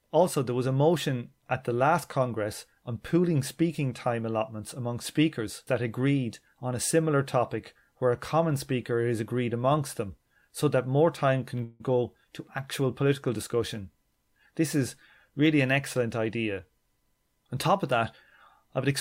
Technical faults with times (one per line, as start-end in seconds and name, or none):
11.63-11.82 call audio freeze